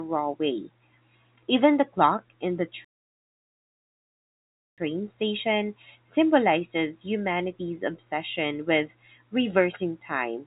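Playback stall from 2.85 to 4.78 s in this telephone-band speech recording, which carries nothing above 4 kHz through its G.711 coding: after "in the" the output goes silent for 1.9 s, then resumes at "station symbolizes humanity's obsession". The likely cause is the player running out of data or its thread being blocked.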